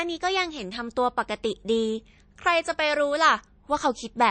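From start to finish the speech has plainly audible codec damage, and it sounds like MP3 compression was likely the cause. There's nothing above about 9 kHz, so the top end is cut flat, and the quieter detail has that watery, swirly texture of weak frequency lines flickering on and off between frames. The s sounds get a metallic edge and consonant attacks smear. That level of damage fits a bitrate somewhere around 37 kbps.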